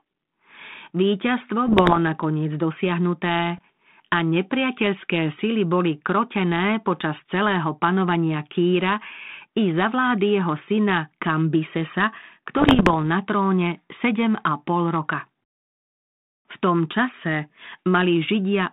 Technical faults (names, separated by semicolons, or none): bit errors on an ADPCM link